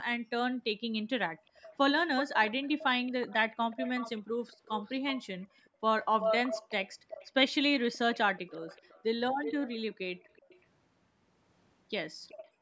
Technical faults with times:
0.17-1.52 background gated by the echo canceller
1.46-10.65 echo leak
5.70-5.81 background gated by the echo canceller
12.28-12.49 echo leak
12.49-12.61 background gated by the echo canceller

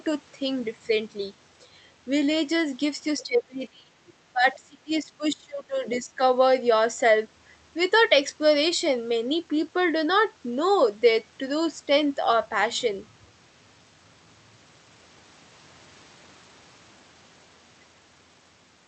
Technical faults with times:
3.23-3.94 speech suppressed in double talk
4.08-4.13 other side's voice leaking through
4.32-6.21 speech suppressed in double talk

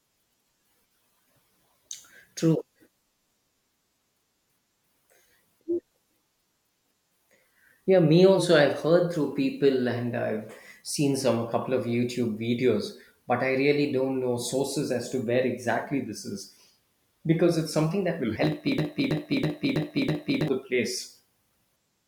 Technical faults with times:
18.78-20.48 broken-record loop

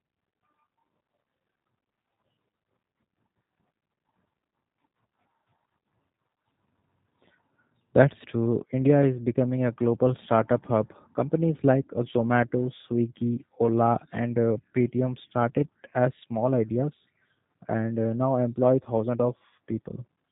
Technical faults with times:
0.00-20.31 G.729 codec

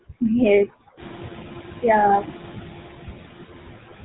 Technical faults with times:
0.00-4.04 noise suppressor artifacts
0.00-4.04 GSM full-rate codec

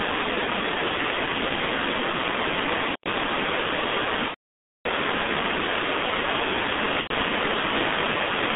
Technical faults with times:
0.00-8.56 G.723.1 codec
2.92-3.09 intermittent contact
4.28-4.86 VoIP packet loss concealed by the speech codec
7.01-7.12 VoIP packet loss concealed by the speech codec

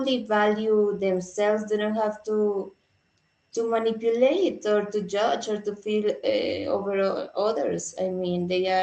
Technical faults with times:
none

